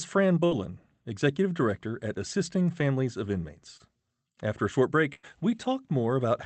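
At 0.45 to 0.53 s the speech stalls into a brief held sound that fades. Then it picks up a little further along, as if a sliver of speech had been clipped out. This is a burst of packet loss. Several consecutive packets never arrived in time, so the receiver stretched the last sound for about 58 ms while turning it down. When real audio resumed, roughly 60 ms of the original was simply gone.

Around 3.77 to 3.82 s there is a quick smear, a small wobble rather than a gap, where a short sound can slip away. That is short concealed packet loss. About 20 ms of the call reached the decoder too late. The receiver papered over it with roughly 24 ms of synthesized continuation, built from the preceding pitch or shaped noise, then blended back into the genuine signal.

The longer dropout comes at 5.14 to 5.25 s: a sustained, decaying sound, then a jump forward. It is another burst of packet loss, this time with about 95 ms of faded concealment standing in for roughly 100 ms of missing speech. 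All of this rides over the Opus call path, whose coding caps the audio at about 8 kHz, which fits a modest bitrate around 24 kbps.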